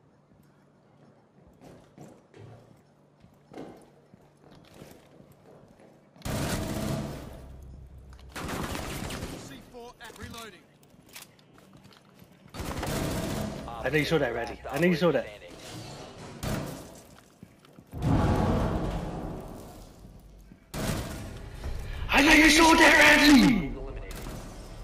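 From 21.93 s to the end, a doubled audio track appears: a flat copy roughly 5 dB quieter trails by about 150 ms, likely from a second capture path, starting abruptly without an echo's decay.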